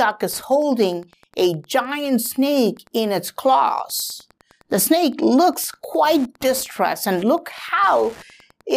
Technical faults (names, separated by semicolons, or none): Wi-Fi interference